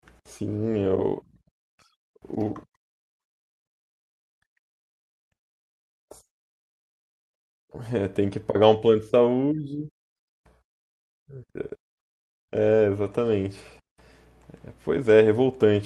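Speech recording, no technical faults heard anywhere in the clip.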